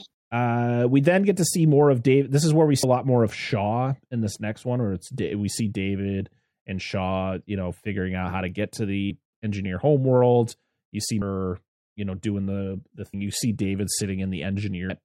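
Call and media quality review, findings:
Compressed frames skipped at 2.83, 9.10, 11.22, 13.14 and 14.90 s (e.g. after "is where we"). Decoder or file loses several 32 ms frames and jumps a fraction of a second.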